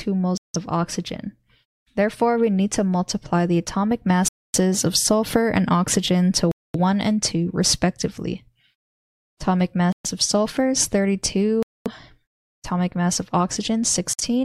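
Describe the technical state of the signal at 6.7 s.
At 6.7 s the signal is inside a dropout that runs from 6.51 to 6.75 s: the audio cuts to about 0.23 s of silence, then sound returns abruptly. This is a Bluetooth stall, likely caused by radio interference delaying packets until the headphones' buffer emptied and playback halted while retransmissions arrived. On a waveform it shows as a flat line with hard edges; on a spectrogram, a blank vertical band across all frequencies.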